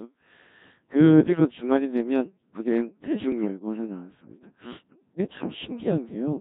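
Speech, heavily degraded by the Codec 2 vocoder throughout. The audio sounds robotic and buzzy, which fits the very low 1.3 kbit/s mode. Only pitch, voicing, energy and a spectral envelope survive. The decoder rebuilds the sound from sine waves, so the original waveform is gone. Anything beyond a single voice gets smeared into the same synthetic buzz. Three bursts of bit errors on digital voice radio also break through: at 1.28 to 1.40 s, at 3.32 to 3.48 s, and at 5.84 to 5.91 s. Each burst jumps in pitch, level and tone colour. It warbles into brief robotic gibberish. The first two last long enough to point to about three vocoder frames damaged. The last points to a single frame. These bursts fit a bit error rate of a few percent, as at the edge of coverage.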